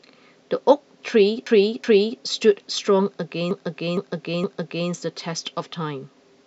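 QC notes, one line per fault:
1.47–2.21 s: repeated frames. A 0.37 s chunk, which fits a run of about four compressed frames, plays twice more, so you get a stutter. That adds 0.74 s.
3.51–4.90 s: repeated frames again. A 0.46 s block, consistent with roughly five frames, replays three extra times. You hear a longer stutter, and 1.39 s gets added.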